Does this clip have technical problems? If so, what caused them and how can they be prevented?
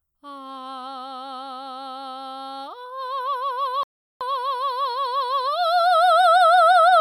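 Yes, there's a rebuffering stall in this music clip. At 3.83 s the playback just drops to silence and holds there until 4.21 s, then picks up exactly where it left off, so nothing is skipped but about 0.37 s of dead air gets inserted. That's the player draining its downloaded buffer faster than new data arrived and waiting for more. To prevent it, keep a deeper playback buffer or switch to a lower bitrate when the connection slows.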